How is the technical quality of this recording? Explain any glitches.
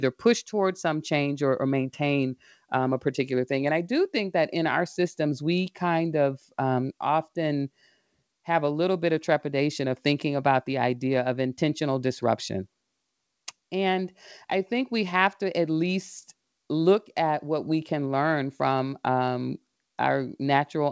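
Nothing stood out as a glitch on listening to this speech, which comes over a G.722 call path with nothing above 8 kHz.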